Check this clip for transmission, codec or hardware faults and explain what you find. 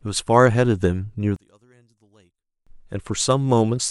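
One fault is present, affecting the speech from 1.36 s to 2.67 s. Across that stretch the sound collapses by about 35 dB, leaving only a faint residue before normal level returns. This pattern is consistent with one channel inverted: one stereo channel has its polarity flipped, so when the pair is summed to mono, the material common to both cancels. Centred speech and low frequencies largely disappear, and only the small difference between channels survives. That is the likely cause.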